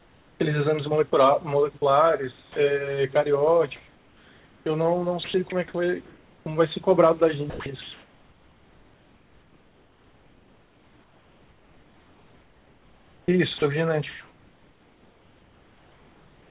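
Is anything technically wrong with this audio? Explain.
Yes. The background is replaced by comfort noise at 0.0–0.4 s, 3.76–4.66 s and 6.06–6.46 s. The steady, featureless hiss shifts by about 3, 2 and 1 dB. It likely comes from discontinuous transmission, with the receiver synthesising noise during pauses.

The sound is also chopped by the voice detector at 1.78–2.56 s, 5.24–5.52 s, and from 7.5 s to the end. Quiet speech edges drop into comfort noise. This is likely the sender's detector switching transmission on and off. The final stretch is the most heavily affected, with about 8 s of it replaced.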